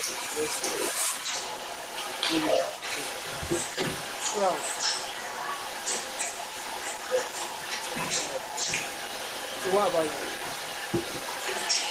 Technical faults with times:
0.00-11.90 echo leak

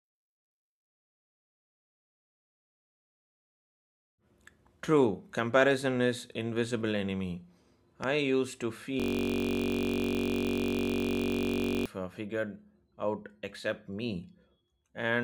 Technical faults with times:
8.04-8.06 loud pop
9.00-11.86 system hang loop

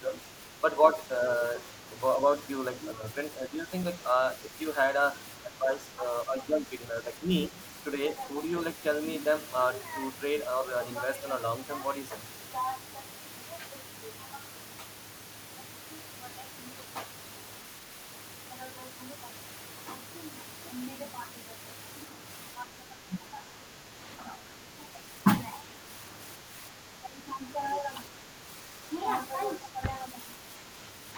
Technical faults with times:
0.00-1.20 speech suppressed in double talk
2.93-3.68 speech suppressed in double talk
5.43-7.57 speech suppressed in double talk
22.56-25.25 speech suppressed in double talk
26.41-27.49 speech suppressed in double talk
29.61-30.75 speech suppressed in double talk

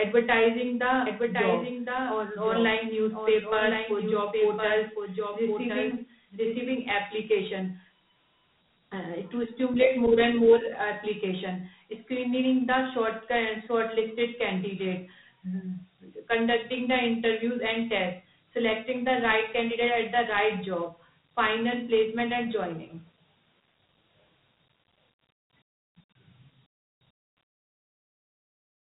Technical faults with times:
0.00-28.97 Dialogic VOX ADPCM
1.06-6.70 doubled audio track

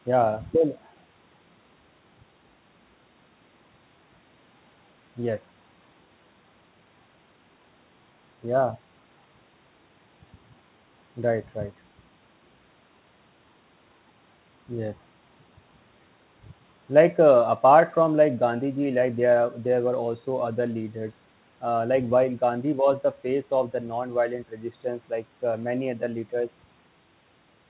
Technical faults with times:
none

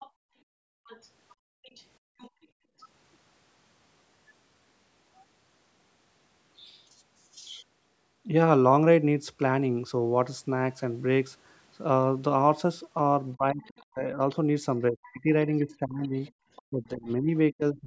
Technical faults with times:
0.00-2.83 other side's voice leaking through
0.10-2.79 background gated by the echo canceller
13.35-17.87 speech suppressed in double talk
13.62-13.85 other side's voice leaking through
15.04-16.62 other side's voice leaking through

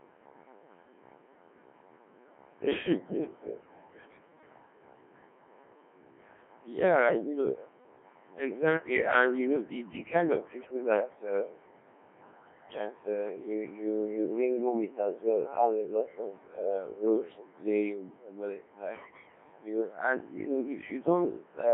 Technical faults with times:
0.00-21.74 Codec 2 vocoder

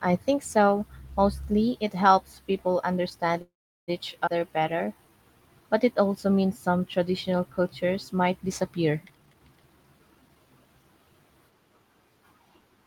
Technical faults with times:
3.41-3.90 call audio freeze
4.26-4.29 skip ahead
4.39-5.17 jitter buffer slow-down
9.04-10.36 jitter buffer speed-up

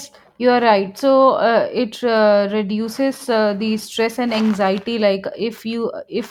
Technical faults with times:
none

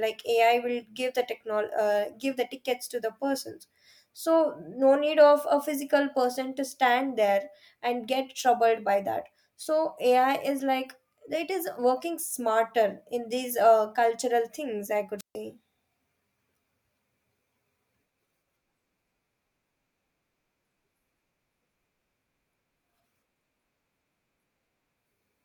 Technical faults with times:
15.18-15.35 wireless microphone squelch dropout

